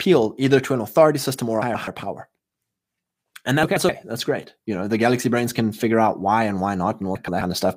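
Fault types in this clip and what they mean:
frames out of order: two adjacent blocks of about 128 ms each, consistent with runs of four frames, are decoded in swapped order, so a 0.26 s stretch plays with its halves exchanged. It heard as a garbled flutter, at 1.62–1.88 s after "authority system or a", 3.63–3.89 s just before "that's great you know", and 7.15–7.41 s after "out why and why". Overall timing is unchanged.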